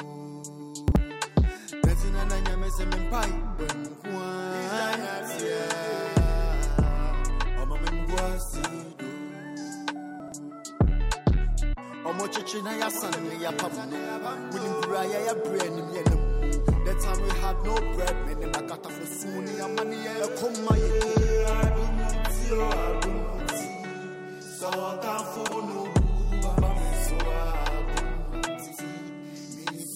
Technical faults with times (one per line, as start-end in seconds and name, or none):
0.88-0.96 chunks out of order
10.20-10.32 chunks out of order
25.36-25.52 chunks out of order